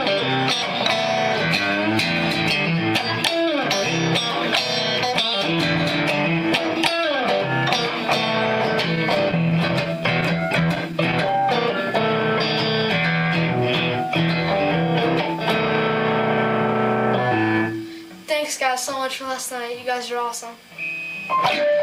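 Between 8.95 and 11.41 s, packets went missing or arrived late, producing scattered short gaps. The receiver filled each hole by extending the preceding sound. About fifteen such patches, none longer than roughly 10 ms, come through as brief ticks and smears.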